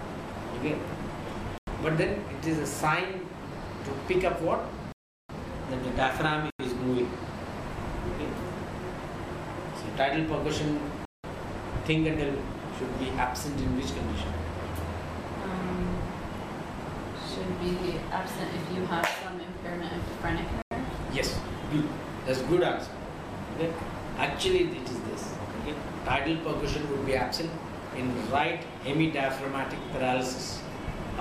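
Blocks of digital silence cut the sound at 1.58, 4.92, 6.50, 11.05 and 20.62 s. They last 93, 372, 93, 186 and 93 ms. Each is a hard hole with no fade. The lengths fit whole 4096-sample buffers that were not filled in time or held invalid values.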